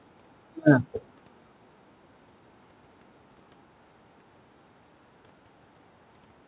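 Nothing goes wrong anywhere here; the speech came over a call link, and the lack of anything above 4 kHz, which fits a G.711 mu-law connection, is just how that kind of line sounds rather than a fault.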